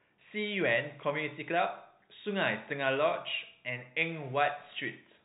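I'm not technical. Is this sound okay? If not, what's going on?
Yes, nothing in this speech clip needs fixing. It has gone through ordinary G.711 telephone coding, so it has the narrow, muffled quality of a landline call, because the highest frequencies above 4 kHz are left out.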